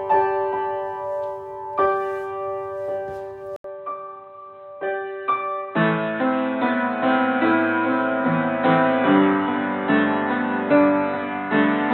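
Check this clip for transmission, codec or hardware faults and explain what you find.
One fault is present. At 3.56 s, an 80 ms gap appears. From then on, nothing above 4 kHz remains, the level falls about 5 dB, and a new background noise enters. The likely cause is an input switched to a poorer device with a narrower band. The sound turns dull and boxy.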